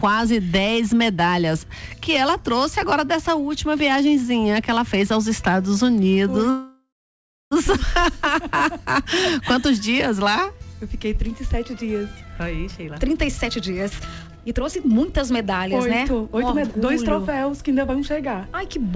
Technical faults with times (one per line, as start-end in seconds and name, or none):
6.50-7.53 call audio freeze
12.20-17.60 jitter buffer speed-up